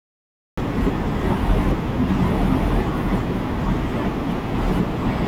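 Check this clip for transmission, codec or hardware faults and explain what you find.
There is one fault, a cut-off start. From 0 to 0.58 s the clip holds digital silence, then speech appears abruptly mid-sound, because capture began late and missed its onset. There is no natural attack. A waveform shows a flat line jumping straight into the speech, and a spectrogram shows a hard vertical edge.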